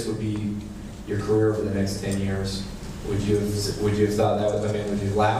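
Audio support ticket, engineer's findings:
Listened through and found nothing to flag here, so no fault to log against this clip.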